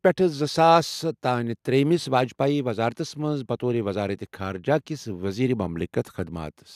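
No technical faults are audible anywhere in the recording.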